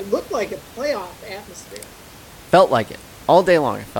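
No technical faults can be heard anywhere in the speech, and the only other sound is the room's own background noise, sitting about 24 dB below the speech as part of the recording.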